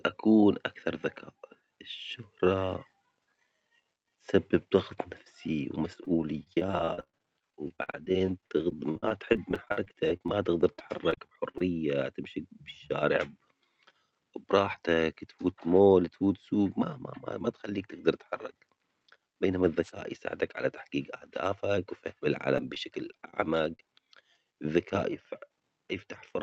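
From 5.80 to 11.64 s the speech breaks into repeated packet loss, giving a robotic sound. Dozens of short dropouts, none longer than 53 ms, are each patched by stretching the preceding sound, so about a fifth of the span is concealment. The voice turns choppy, with fragments missing. Unlike a dropout, which leaves plain silence, each hole here is filled with a repeat of the last sound.

At 19.82 to 19.91 s a wireless microphone noise hit cuts in: a brief swish of static as the radio link fades and receiver noise rises over the voice for under a tenth of a second. It differs from the packet-loss faults because it adds hiss over the signal rather than chopping or repeating pieces of it.

From 22.48 to 23.89 s the repeated packet loss returns, lighter this time. There are about nine gaps, the longest 36 ms, so roughly 8% of the stretch is patched. The result is a brief robotic flutter rather than sustained choppiness. 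Throughout, the call codec's high-frequency limit near 8 kHz can be heard.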